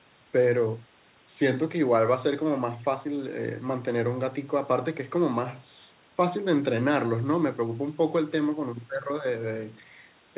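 No technical faults can be heard in this speech recording.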